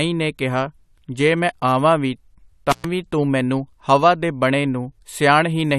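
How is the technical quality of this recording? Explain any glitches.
The recording has one glitch, an intermittent contact at 2.71 to 2.85 s. A loose cable or plug briefly opened the signal path for about 115 ms, so the speech drops out with crackle at both edges and faint hiss in the gap.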